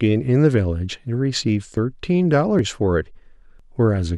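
At 1.77 s and 2.59 s the speech jumps ahead by about 10 ms, then at 3.60 s by roughly 30 ms. These are most likely dropped buffers (overrun): samples got overwritten before being read, so the audio on either side is butted together without any gap.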